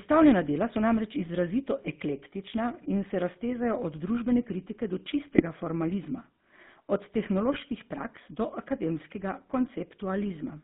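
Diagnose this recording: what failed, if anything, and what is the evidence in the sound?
The codec stage failed throughout. This is the GSM full-rate codec. The speech is buzzy and gravelly, and the band is confined to roughly 150 Hz to 3.6 kHz. The coarse pulse excitation causes the rasp, which fits a 13 kbps full-rate coder.

GSM bit errors on the radio link hit the decoder twice. There is a squawking burst from 5.32 to 5.43 s, right after "od družbene kritike do", and another from 7.52 to 7.59 s, just before "praks do akademskega". Corrupted filter, pitch and gain values distort those frames.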